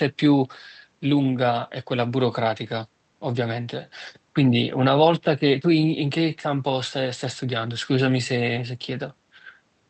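Nothing stood out on listening to this speech, which comes through a call path whose audio band tops out around 8 kHz.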